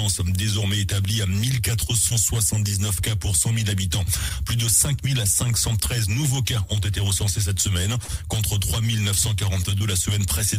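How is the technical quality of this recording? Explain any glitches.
One glitch stands out: a short concealed packet loss from 9.78 to 9.82 s. About 20 ms of audio never reached the decoder in time, so the receiver extrapolated from the preceding sound and crossfaded back, leaving a brief smear or wobble.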